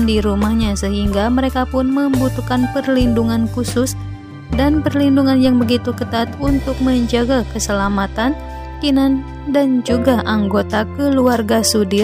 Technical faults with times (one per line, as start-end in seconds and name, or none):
5.45 DC step
7.84 DC step